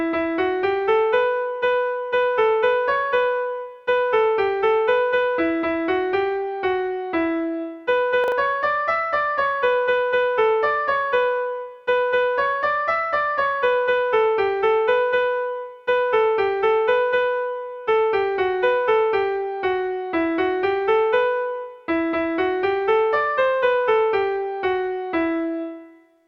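Chunks out of order occur from 8.24 to 8.32 s. One 40 ms chunk of audio arrived one chunk late, so it plays after the 40 ms chunk that should have followed it. Nothing is missing, but the two pieces swap places across those 80 ms, creating three hard joins where the waveform jumps abruptly. The result is a brief garbled, jumbled flicker in the sound.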